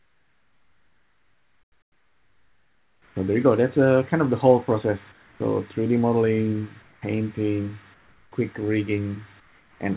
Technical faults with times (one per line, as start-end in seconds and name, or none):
0.00-3.16 comfort noise in place of the background
5.12-5.40 comfort noise in place of the background
6.82-7.02 comfort noise in place of the background
7.94-8.32 comfort noise in place of the background
9.40-9.80 comfort noise in place of the background